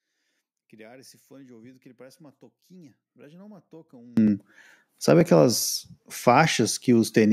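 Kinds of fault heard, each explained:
One channel inverted: From the start until about 4.17 s, the speech, heard summed to mono, sinks by about 30 dB to a faint residue, then snaps back to full level. The likely cause is one stereo channel with reversed polarity, so the centred voice cancels against its twin and only the small difference between channels survives. A muted or missing channel would cost only around 6 dB; a collapse this deep means cancellation.
Dropped buffer (overrun): At 4.28 s and again at 5.21 s the speech lurches forward, losing roughly 5 ms each time with no silent gap. This likely comes from the program falling behind, so the hardware overwrote samples before they were read and the audio on either side was joined directly. A dropout would leave an audible hole of silence. Here the sound simply skips ahead.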